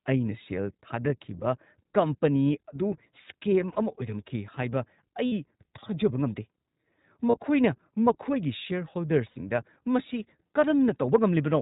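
From the start the speech is band-limited to below 4 kHz and has a slightly rough, synthetic edge that is plainly audible. This is the sound of the iLBC codec, which fits its 15.2 kbps mode with 20 ms frames. Each frame's excitation is coded without reference to the previous one, so the coarse waveform modelling comes through as a grainy texture. Everything above the narrowband ceiling is missing.

Lost iLBC frames then break the flow four times: 3.72 to 3.78 s (40 ms), 5.26 to 5.33 s (60 ms), 7.30 to 7.37 s (40 ms) and 9.30 to 9.38 s (60 ms). When packets go missing, the decoder fills the gap by repeating the last pitch cycle blended with noise. Each gap is heard as a brief held, faintly buzzy vowel. Because iLBC frames are independent, normal decoding resumes almost immediately after each one.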